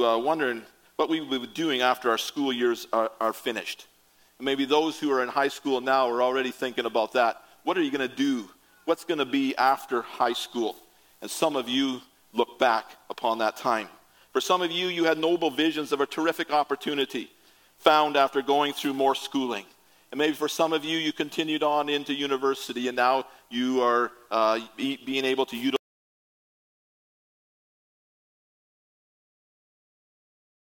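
At 25.76 s the audio cuts out abruptly and stays silent to the end, an audio dropout to silence with no room tone at all. On a waveform it becomes a flat line, and a spectrogram goes uniformly black. The likely cause is lost input while recording continued.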